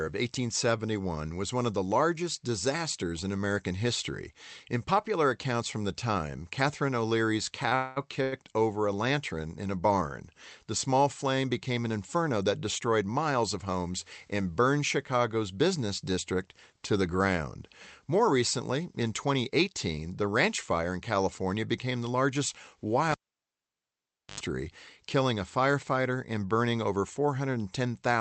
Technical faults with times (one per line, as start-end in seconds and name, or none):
7.69-7.74 short stall from a late packet
7.76-7.98 call audio freeze
8.22-8.34 short stall from a late packet
12.15-13.76 jitter buffer speed-up
19.27-19.68 jitter buffer speed-up
23.12-24.40 cable pulled and plugged in